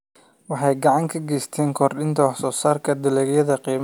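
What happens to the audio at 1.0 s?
Nothing goes wrong at 1.0 s; the speech runs on intact through that moment, with no dropout, click or distortion.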